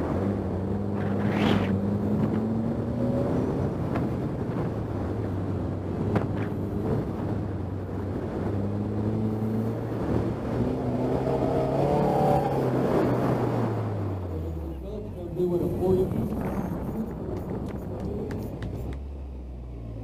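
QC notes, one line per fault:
5.26–6.85 s, 15.13–16.88 s, 18.75 s to the end: drift correction step. Playback abruptly slows by 6.26%, dropping pitch about 112 cents (slightly over a semitone) in the first two spans and then snapping back. The last span instead speeds up 6.26%, raising pitch about 105 cents. This is likely a clock-matching resampler jumping its rate to rebalance a buffer. On a spectrogram, harmonics step down or up together at each boundary. The waveform shows stretched or compressed periods.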